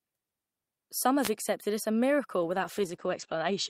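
Speech with two faults. From 1.21 to 1.31 s, just before "accepted it as a", a wireless microphone noise hit cuts in as a brief swish of static as the FM radio path fades and receiver noise swells. Unlike a digital dropout, the sound isn't silenced but buried under hiss. From 2.38 s, right after "accepted it as a", a call bitrate drop sets in and lasts to the end. The audio turns rough and watery and loses its top above 8 kHz (down from 20 kHz), which fits the encoder falling from about 48 to 12 kbps. It holds at that low rate for about 1.2 s. Unlike packet loss, nothing is dropped, but the whole stretch is coded coarsely.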